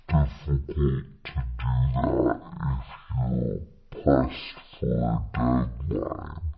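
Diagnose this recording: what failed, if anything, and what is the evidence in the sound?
Wrong sample rate throughout, at playback: the speech runs at 0.36 times speed and 17.6 semitones low, which fits 44.1 kHz audio played at 16 kHz unconverted.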